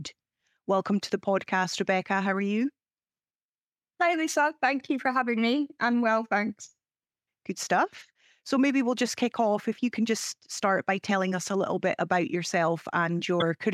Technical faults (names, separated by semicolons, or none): damaged data in a compressed stream